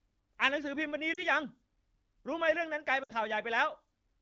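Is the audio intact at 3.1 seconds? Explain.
No. Lost AMR speech frames break the sound from 3.03 to 3.12 s. That gap of about 60 ms fits three 20 ms frames. The decoder repeats the last good pitch and vocal tract settings at falling gain. The sound smears briefly, dips toward silence, then returns weak or rough for a moment.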